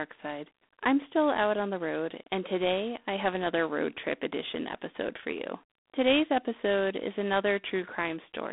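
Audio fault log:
Throughout: G.726 ADPCM. The speech is confined to roughly 300 Hz to 3.6 kHz, with nothing above 3.8 kHz, and carries a plainly audible rasping hiss that rises and falls with the speech level, which fits 24 kbit/s coding. Plain band-limiting would sound clean, and steady line noise would not follow the speech.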